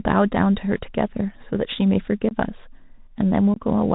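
Speech carried over a Bluetooth CVSD headset codec throughout, which fits a 64 kbps CVSD link: a spectrogram shows nothing above 4 kHz, with granular hiss and scratchy, slope-overloaded sibilants. Unconcealed Bluetooth headset packet loss opens two abrupt gaps of roughly 22.5 ms each, at 2.29 to 2.32 s and 3.54 to 3.61 s. Each gap is a few dropped packets, which appears in the waveform as a hard-edged flat hole that can click, followed by briefly quieter speech.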